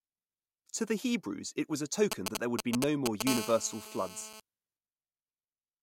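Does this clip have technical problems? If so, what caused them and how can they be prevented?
Yes. GSM signalling bursts appear from 2.12 to 3.22 s, right after "it was a": a galloping dit-dit-dit of ticks and short buzzes near 217 Hz, roughly as loud as the speech. A nearby 2G phone was sending brief groups of radio bursts, the pattern heard while it exchanges signalling with the network, and a microphone or preamp circuit rectified that RF into audio. Keeping phones well away from the microphone, cables and interface prevents this.

GSM phone buzz follows from 3.27 to 4.40 s: a hard, raspy 217 Hz buzz with a dense stack of harmonics, about 8 dB below the speech and unrelated to it. The steady pulsing points to the same phone now in a call, transmitting its 217-per-second bursts continuously, which the audio electronics demodulated into this tone. Switching phones off or to airplane mode, and using shielded, properly grounded cabling with RF filtering, prevents it.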